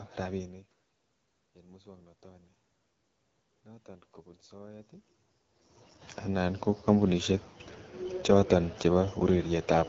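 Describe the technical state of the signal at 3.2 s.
At 3.2 s the signal carries AMR wideband (HD Voice) codec damage, present throughout the clip rather than at that moment alone. The sound points to a rate near 8.85 kbit/s, one of the codec's two lowest, where the pulse-driven vocal tract model has too few bits to track the voice faithfully. Speech comes out rough and raspy, and above 6.4 kHz only shaped noise stands in for detail, with nothing at all beyond 7.6 kHz.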